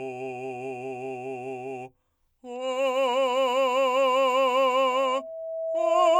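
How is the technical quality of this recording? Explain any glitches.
The recording has one clear fault near the end of the music. Loudspeaker feedback squeal starts at 4.90 s and runs to 6.19 s, where the audio stops. A microphone is picking up the loudspeaker it feeds. At 651 Hz the loop gain tops one, so that frequency reinforces itself on each pass. It is heard as a single steady tone. The tone swells over roughly a second. It ends up a few decibels louder than the music.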